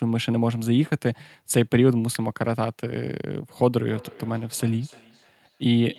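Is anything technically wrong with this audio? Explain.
Yes. Two faults are audible in this speech clip.

At 2.15 s there is an electrical switching spike. It is a single sharp snap sitting on top of the speech. It is brief and hard-edged, unlike anything a mouth produces. A nearby switch, motor or static discharge likely arced for an instant. The audio line picked up that burst of interference. It adds a click without changing the speech around it.

From 3.88 s to the end there is feedback echo between two devices. Each phrase returns at a steady interval of about 300 ms. The repeats sound thinner and more ringing than the original. They peak at about 24 dB below the speech. Two devices in the same room share the call. One plays the other's audio, and that microphone captures it again. Neither echo canceller removes sound played by the other device.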